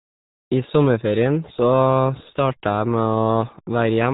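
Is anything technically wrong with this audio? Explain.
Yes. Throughout, the speech carries RealAudio 14.4 codec damage. Its gargly, muffled smearing fits an 8 kbit/s codec, and it has a hard ceiling near 3.8 kHz, while the gargly artifacts set it apart from simple low-pass filtering.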